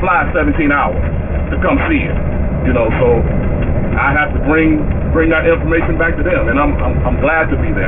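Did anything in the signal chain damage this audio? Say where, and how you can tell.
Yes. Aliasing runs throughout, from a sample-rate conversion stage with no anti-alias filter. The band stops hard at 3 kHz, which fits a drop from 48 kHz to 6 kHz. Higher content folds back beneath that edge as gritty, metallic tones roughly 15 dB below the signal.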